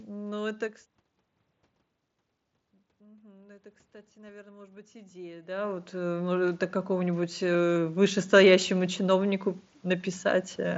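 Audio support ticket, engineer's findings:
Automatic gain rising, 2.98 to 8.99 s: level drops about 18 dB, then voice and room noise swell together as AGC climbs about 14 dB over six seconds. Slow ramp, not a step. Talker movement around 5.5 s also shifts level. Band stops near 7.7 kHz, as expected from the mSBC headset link.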